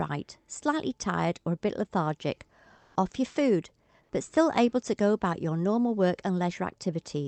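From 2.77 to 2.95 s, in the pause after "or a bit lethargic" and before "off your food but", comfort noise in place of the background fills about 180 ms. The likely cause is discontinuous transmission in the Opus call codec, with the receiver substituting synthetic noise while the sender went quiet. It sits at the same level, about 38 dB below the loud passages, but sounds flat and textureless. A spectrogram shows a smooth, uniform band that is cut off near 8 kHz like the rest of the call.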